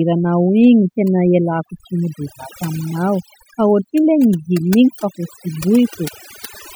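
Overdone noise removal runs through the whole speech clip: bands hovering near the noise estimate are pushed almost to nothing, so pauses sink into near silence dotted with sparkling specks. Unlike a noise gate, it works on single frequency bands rather than the whole signal.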